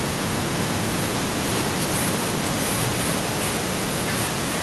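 From 0.99 s to 3.29 s, a delayed copy of the speech comes back, an echo leak. It trails the original by about 0.98 s. It is strong, only about 5 dB below the speech. Likely a far-end loudspeaker fed the microphone, and the echo canceller failed to remove it. A second stretch runs from 3.46 s to the end. The delay is the same. This echo is weaker, around 10 dB down.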